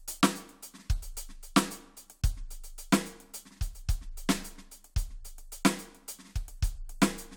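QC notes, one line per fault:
No faults heard anywhere in the music.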